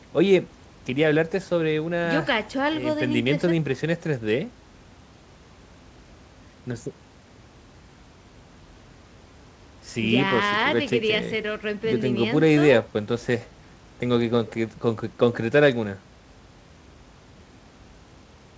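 Nothing stood out on listening to this speech recording, which carries the band limit of a G.722 call path with nothing above 8 kHz and a room background sitting about 32 dB below the speech.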